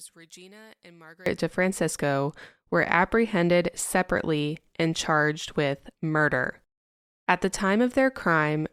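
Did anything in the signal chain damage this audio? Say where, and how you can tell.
Yes. From 0.00 to 1.26 s the speech falls by about 25 dB and sounds faint. That is one channel inverted, likely from a polarity-swapped analogue wiring connection, so summing to mono cancels the centred voice. The waveform shrinks sharply there, and the whole spectrogram fades.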